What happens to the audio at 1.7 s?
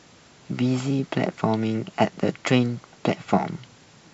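Nothing goes wrong at 1.7 s; the audio runs through that moment intact, with no dropout, click or distortion.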